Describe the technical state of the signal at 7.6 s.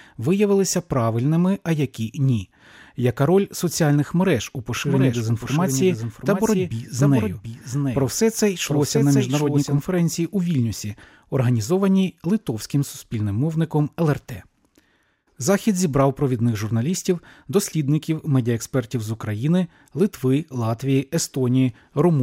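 At 7.6 s the sound is heard twice: a second, about 5 dB quieter full-band copy trails the original by roughly 0.7 s, with no reverb tail or room colouring, producing a stuttering, overlapped echo. This doubled audio track runs from 4.77 s to 9.79 s and cuts in and out abruptly. The likely cause is the same signal being captured again through a slower path, or an edit leaving two misaligned copies mixed together.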